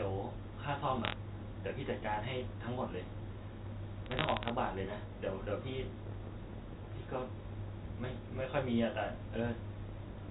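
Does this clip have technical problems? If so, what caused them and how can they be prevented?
Yes. Bits were corrupted on the digital phone line carrying this G.711 mu-law speech, producing bit errors from 1.05 to 1.13 s and from 4.06 to 4.50 s at roughly one bit in five hundred. Each flipped bit changes one logarithmic sample, and a hit on the sign or a high-order bit jumps that sample far off the waveform, so both stretches carry sharp ticks and crackle over intact speech. Error-checked transport or a cleaner line would prevent this.

Chunks out of order occur twice, at 3.12 to 3.20 s and 5.92 to 6.00 s. In each case a 40 ms block of audio arrived or was written one chunk late and played after the block that should follow it. No audio is lost, but the sequence is swapped, creating three hard joins in each spot that sound like a brief jumbled stutter. Reordering packets by sequence number in the jitter buffer before playback prevents it.

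A train of clicks runs from 5.70 s to the end at 10.30 s, about 40 pulses at roughly 8 per second with uneven spacing. The pulses are similar in shape and peak at about 5 dB above the speech, so they stand out as popping through the words and the pauses alike. This pattern likely comes from electrical interference from nearby equipment or a faulty connection or power supply coupling pulses into the signal path. Shielded cabling, moving interfering gear away, or sound connections and a stable power supply would prevent it.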